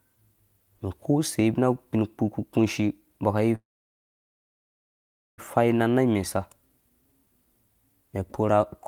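At 3.55 s the speech stops mid-flow, its last sound stretched into a brief fading buzz that drops to silence for about 1.76 s. At 5.40 s the speech picks up exactly where it broke off, so nothing is lost but everything after arrives about 1.8 s late. This is a call audio freeze, likely caused by packets stalling in transit until the jitter buffer emptied and the receiver could only fill the wait.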